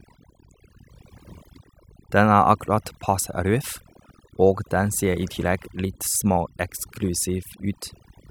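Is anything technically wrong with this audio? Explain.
Yes. Overdone noise removal runs through the whole clip: a noise reducer set too aggressively pulls individual frequency bands down whenever they sit near its noise estimate, taking quiet parts of the speech too, so the background drops and breaks up into twinkling specks.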